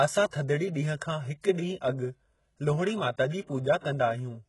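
The speech has likely passed through HE-AAC compression at a very low bitrate, consistent with about 12 kbps. The codec coded only the lower spectrum and rebuilt the treble by copying bands upward, so the damage is heavy: s sounds turn gritty and metallic, and nothing remains above 11.5 kHz.

A pre-echo occurs at 0.31 to 0.33 s and again at 3.80 to 3.84 s. The codec spread its quantisation noise across the block holding a sharp attack, so a brief hiss of 24 ms and then 34 ms precedes each onset, leaving the attack soft and smeared.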